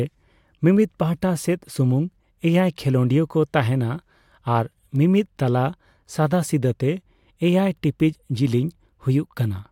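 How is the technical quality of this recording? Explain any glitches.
The recording has one clear technical problem, a steady series of clicks through most of the speech.

Word clock ticks run from 0.59 s to 9.35 s, about one per second, roughly ten in all. The receiving device's clock is not locked to the sender's and drifts by something like 20 parts per million. Each time the two slip past each other, a single sample is dropped or repeated, heard as a sharp tick of uneven strength.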